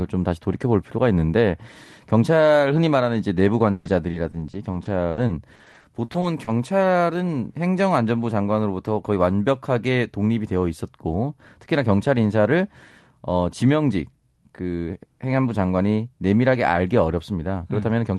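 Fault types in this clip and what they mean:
Repeated packet loss (robotic sound): from 3.71 to 6.48 s the speech turns choppy, with about seventeen short holes, the longest 140 ms. Packets kept arriving late or not at all. Each gap was bridged by stretching the last received sound, covering about 19% of that span, while roughly 520 ms had no coverage at all. The whole thing rides on an Opus-style call codec whose top end stops near 12 kHz.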